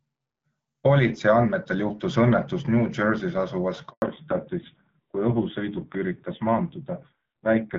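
A handover gap opens at 3.9 s and lasts 120 ms, to 4.02 s. The call was being passed between networks and no speech frames arrived during the changeover, so the sound drops out abruptly and whatever was said then is lost.

A fallback to narrowband follows at 4.02 s and holds to the end. The light coding of the earlier HD Voice wideband path gives way to sound with nothing above 4 kHz, duller and rougher, which fits a low-rate AMR narrowband mode around 5.9 kbit/s.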